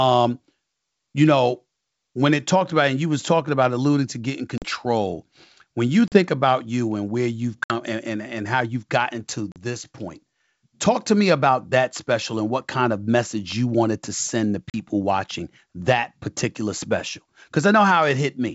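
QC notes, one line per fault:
4.58–4.65, 6.08–6.18, 7.64–7.72, 9.52–9.58, 14.70–14.83 s: packet loss on an ADPCM call. Hard silent holes of about 40 ms, 60 ms at 7.64 s after "you and where you've", each a few packets' worth. The decoder's predictor and step size drift out of sync, so the speech comes back slightly distorted until it resettles.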